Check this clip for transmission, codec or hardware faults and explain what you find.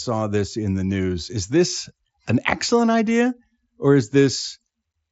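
No faults turn up: the speech carries the expected signature of a Bluetooth mSBC headset codec link, with content stopping at about 7.7 kHz and only the light codec texture that wideband headset audio normally has.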